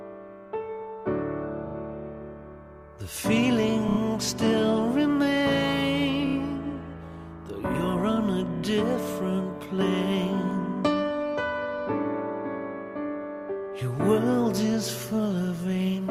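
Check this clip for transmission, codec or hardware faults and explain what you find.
The clip has four bursts of repeated frames, at 1.66–1.74 s, 3.88–3.98 s, 6.26–6.35 s and 8.56–8.63 s. Each time, a short block of compressed audio is decoded again: 40 ms played twice more at the first, then 30 ms blocks replayed three, three and two extra times. Each burst sounds like a quick mechanical stutter, and each one adds 60–90 ms to the running time.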